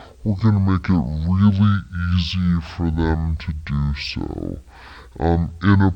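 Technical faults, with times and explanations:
Throughout, stereo read as mono: the speech runs at half speed (0.5x) and sits a full octave low (-12 semitones). That fits interleaved left and right samples being taken one after another as a single channel, so each original moment now spans twice as many samples. On a spectrogram the harmonics are compressed toward the bottom, and a fainter mirror image of the speech pattern appears in the upper half. The waveform's syllable envelopes look stretched to double length.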